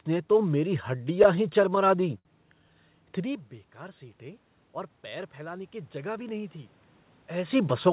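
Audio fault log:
0.88–2.28 s, repeated stalls (stutter): eleven brief hitches, longest 66 ms, totalling about 170 ms. Late packets kept emptying the jitter buffer, so the receiver stretched the last sound each time. Nothing drops out, but the audio drags and stutters.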